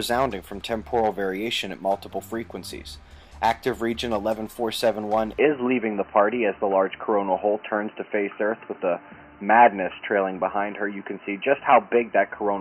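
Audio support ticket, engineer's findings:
Input switched to a poorer device at 5.39 s, likely headset profile. Band stops at 3 kHz: dull, boxy, level shifted, faint new noise, no gap.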